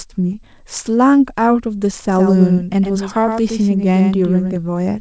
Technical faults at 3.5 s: doubled audio track

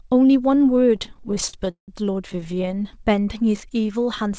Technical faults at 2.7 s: repeated stalls (stutter)

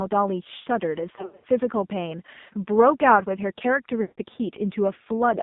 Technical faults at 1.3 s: AMR narrowband mobile codec; lost AMR speech frames

